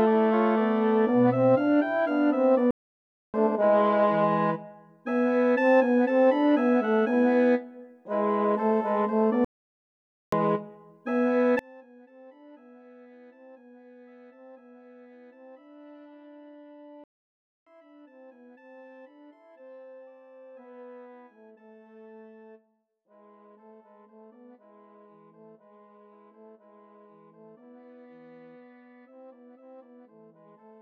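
At 2.71 s the sound stops dead for 0.63 s, then picks up again at 3.34 s. This is a playback stall. The likely cause is the player running out of data or its thread being blocked, so nothing reached the output. A second stall hits at 9.45 s and lasts 0.88 s, ending at 10.32 s. Each gap is a hard silence in mid-flow, not a fade.

From 11.59 s to the end, the audio drops by about 30 dB. The centre content nearly disappears. What remains sounds like a faint copy. This points to one channel inverted. One stereo channel has likely had its polarity reversed, so the shared centre content cancels when the channels are combined. Only the difference between them survives.

A third playback stall falls inside this weakened stretch, at 17.04 s. The sound cuts out for 0.63 s and resumes at 17.67 s.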